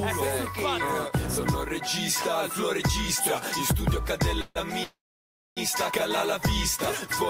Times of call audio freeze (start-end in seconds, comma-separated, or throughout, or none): 4.41-4.57, 4.83-5.59